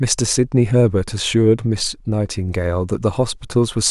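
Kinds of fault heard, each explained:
No faults detected in the speech recording; nothing to report.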